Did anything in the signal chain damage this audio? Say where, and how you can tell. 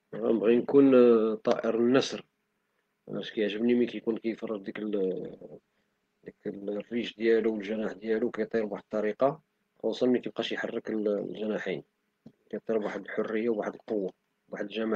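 Yes. A call bitrate drop hits the codec stage from 5.23 to 9.25 s. The speech turns coarser and rougher, then recovers. That fits the encoder being pushed from about 32 kbps to 16 kbps, staying at its lowest for roughly four seconds.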